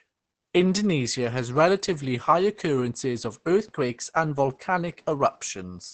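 Throughout the speech, the sound is muffled and hoarse, with nothing above 8.8 kHz. This is likely Opus compression in its speech mode at a very low rate, around 12 kbps. Unlike MP3 it has no swirling gaps, and unlike a simple low-pass, the remaining sound itself turns rough.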